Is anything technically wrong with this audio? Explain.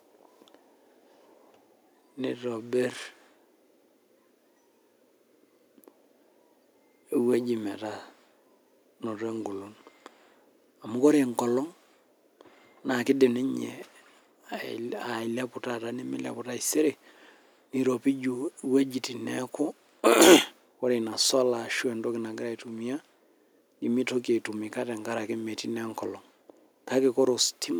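Yes. Microphone overload occurs from 20.07 to 20.36 s. Speech peaks crackle harshly, likely because input gain exceeded the converter's limit by about 6 dB.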